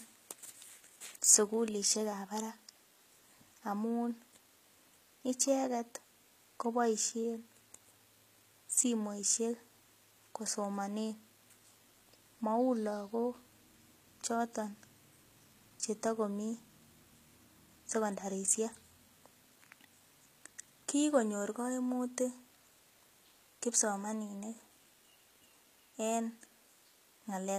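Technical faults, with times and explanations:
Throughout: HE-AAC compression. The speech carries plainly audible codec damage, with nothing above 14.9 kHz. The s sounds come out gritty and lispy because the upper band is likely rebuilt by copying lower bands, which points to a very low bitrate near 20 kbps.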